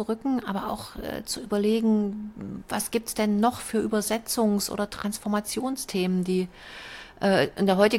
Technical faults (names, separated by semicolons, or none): none